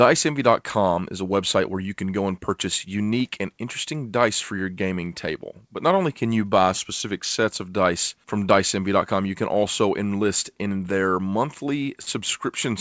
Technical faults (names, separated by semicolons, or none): short concealed packet loss